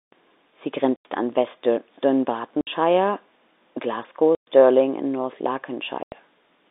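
A telephone-band speech recording, limited to roughly 250 Hz to 3.7 kHz by the telephone line and G.711 coding, is broken by packet loss filled with silence at 0.96–1.05 s, 2.61–2.67 s, 4.35–4.47 s and 6.03–6.12 s. The gaps are silence with hard edges, not smeared or repeated concealment, and their lengths (90, 60, 120 and 90 ms) are all multiples of 30 ms, which fits lost 30 ms packets.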